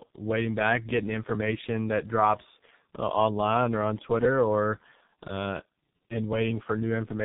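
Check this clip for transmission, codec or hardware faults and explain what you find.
One fault, present throughout: tandem speech coding. The speech passed through AMR-NB at 6.7 kbit/s, G.711, then G.723.1 at 6.3 kbit/s, recompressing already-degraded output. Compounded roughness, warble and muffling, with nothing above 3.8 kHz, exceed what one low-rate codec alone produces.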